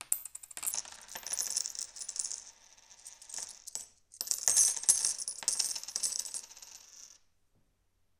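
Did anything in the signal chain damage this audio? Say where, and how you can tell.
Yes. From 0.72 s to the end, the sound runs slow and sits lower in pitch. This is a wrong sample rate fault at the playback stage. Speed drops to about 0.73 times normal, and pitch falls by about 5.5 semitones. Both shift by the same ratio. That link points to samples clocked out slower than they were captured, with no resampling. The ratio fits 44.1 kHz material played at 32 kHz.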